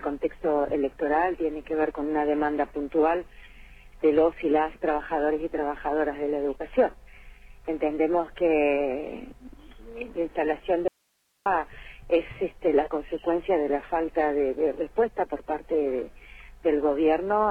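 An audio dropout to a faint residue hits the sound at 10.88 s and lasts until 11.46 s, about 0.58 s. The signal cuts out abruptly. Only hiss remains, roughly 45 dB below normal level. This is likely a momentary signal loss with the downstream path still live.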